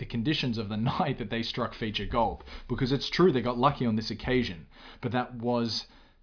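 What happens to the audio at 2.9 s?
Nothing goes wrong at 2.9 s; the speech runs through that moment intact, with no dropout, click or other technical fault.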